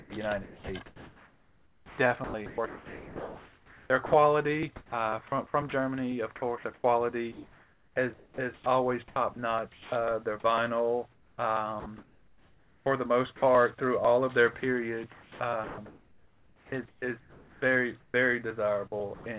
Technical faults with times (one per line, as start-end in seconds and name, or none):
0.00-4.12 sound chopped by the voice detector
4.76-5.72 sound chopped by the voice detector
6.36-9.92 sound chopped by the voice detector
11.12-13.42 sound chopped by the voice detector
14.60-18.14 sound chopped by the voice detector
19.14-19.26 sound dropped by the voice detector